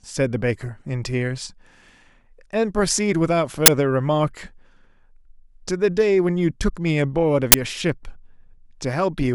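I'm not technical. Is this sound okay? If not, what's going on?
No. There are two sharp bursts of harsh digital noise in the speech, at 3.66 s and 7.52 s. Each lasts 20 ms. This is an uninitialised buffer: the system played a chunk of memory before any audio was written into it, so leftover data came out as noise.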